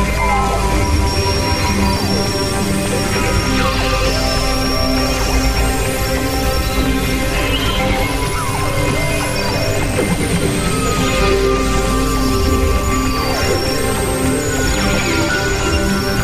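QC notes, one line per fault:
Nothing to flag here, as no problems turned up anywhere in this audio.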